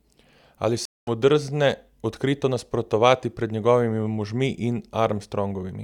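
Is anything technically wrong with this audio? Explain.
Yes. At 0.85 s the speech drops out for about 0.22 s, a stream reconnect. The connection broke and the player restarted its decoder mid-stream. When sound returns at 1.10 s, it has jumped ahead by roughly 150 ms. The material in between is simply missing.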